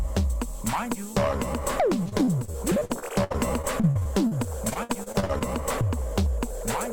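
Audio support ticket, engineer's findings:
Repeated packet loss (robotic sound), 2.03–4.33 s and 4.69–5.43 s: packets dropped or arrived late again and again. The jitter buffer/PLC stage filled each short gap, up to about 60 ms, by extending the previous sound. This concealment covers roughly a fifth of the first stretch and a third of the second, so the audio is choppy with pieces missing.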